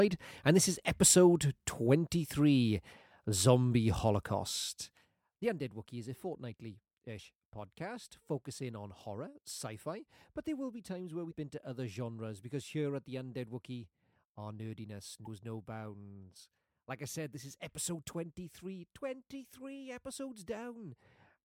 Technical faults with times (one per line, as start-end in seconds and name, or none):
11.27-11.33 damaged data in a compressed stream
15.22-15.27 damaged data in a compressed stream